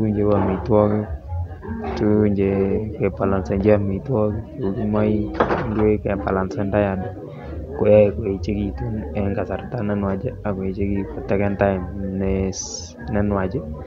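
No technical faults can be heard in the speech recording, so there is nothing to describe in time order.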